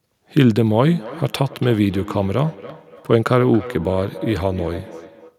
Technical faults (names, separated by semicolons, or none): feedback echo between two devices